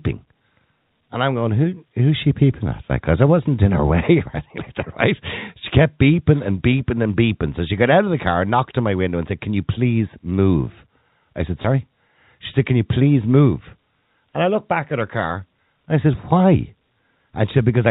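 No technical faults are present; the speech is carried on a G.711 A-law telephone path at 64 kbps, its 4 kHz ceiling and faint level-following quantisation noise being normal for that format.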